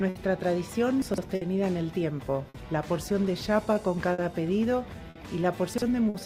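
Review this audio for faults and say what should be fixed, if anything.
Clock drift between sender and receiver runs through the whole clip. The sending side's clock is running roughly 5 percent slow, so the receiver's jitter buffer keeps draining, and playback has to pad or stretch short pieces to keep going. The result is small timing hiccups spread unevenly across the audio. A single late packet causes one isolated stall, but drift keeps recurring with no network event behind it. Adaptive resampling at the receiver, locked to the measured sender rate, would prevent this.

Short stalls from a late packet occur at 0.09–0.17 s (60 ms held), 1.35–1.43 s (60 ms), 2.49–2.56 s (50 ms), 4.13–4.20 s (50 ms), 5.10–5.17 s (50 ms) and 6.09–6.16 s (50 ms). Each time, the buffer ran empty and the last sound was stretched until the packet arrived. Playback then resumed where it had stopped, so the overall delay grew by the length of each stall. 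This differs from a dropout: nothing is missing. Instead of a gap, a sound lingers with a faint buzz or dip. A deeper or adaptive jitter buffer would absorb these late arrivals.

Chunks out of order occur at 1.02–1.18 s and 5.74–5.82 s. At 1.02 s a 40 ms chunk plays three chunks late, after audio that should have followed it. At 5.74 s a 40 ms chunk plays one chunk late. Each misplaced chunk creates three hard joins, heard as a brief jumbled moment. Packet loss leaves a hole or a concealed smear, whereas here all the audio is present but in the wrong sequence. Reordering packets by sequence number or timestamp before playback would fix it.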